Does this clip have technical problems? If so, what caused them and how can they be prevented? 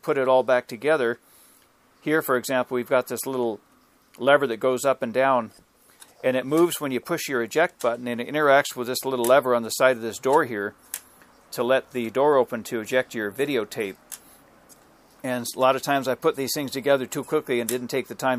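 Yes. Clock slip clicks run from 0.31 s to 18.20 s as faint regular ticks roughly every 0.4 s, each a single sample dropped or repeated. This likely comes from two devices on independent clocks drifting apart by around 50 ppm. Prevent it by locking all devices to one word clock or using asynchronous sample-rate conversion.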